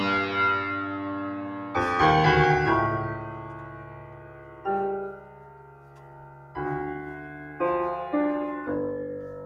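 A piece of music runs through a speech-tuned noise suppressor for its whole length. The processor treats sustained tones and reverb as noise, so the level swings by roughly 10 dB: attacks survive while held notes and tails pump and thin. The waveform shows a breathing envelope, and the spectrogram shows tails fading early. The sound cut by the noise suppressor is clearest from 0.76 to 1.75 s, 3.15 to 4.65 s and 5.16 to 6.55 s, where sustained material sinks by about 5 dB. On the waveform these spans appear as visibly narrowed sections, and on the spectrogram as dimmed bands behind still-bright transient onsets.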